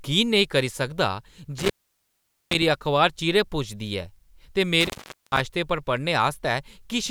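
At 1.58 to 2.62 s and again at 4.81 to 5.40 s the speech drops out, with crackle at each edge and faint hiss in the gaps of 0.82 s and 0.43 s. This is an intermittent contact: a loose cable or plug briefly opened the signal path.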